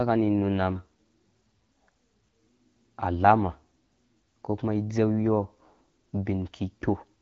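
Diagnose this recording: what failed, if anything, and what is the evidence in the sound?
Nothing failed in this speech recording, which comes through an AMR wideband (HD Voice) codec path running normally at a rate that fits 12.65 kbit/s.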